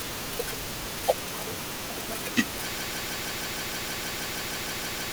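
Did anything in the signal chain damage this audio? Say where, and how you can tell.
Yes. From 2.78 s to the end of the clip, the speech turns into a broken-record loop: a fragment of about 157 ms repeats back to back, identical each time, fifteen times in all, and the sound that should follow never arrives. This points to a stall at the buffer or playback stage, most likely the source stopped delivering data and the output kept replaying the last block it held rather than going silent.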